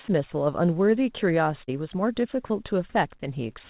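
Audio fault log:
1.64–1.70 s, short concealed packet loss: 40 ms of the call missed the decoder, so the receiver filled 35 ms by extending the last sound, then blended back into real audio. It comes through as a brief smear over the G.711 sound, which tops out at 4 kHz.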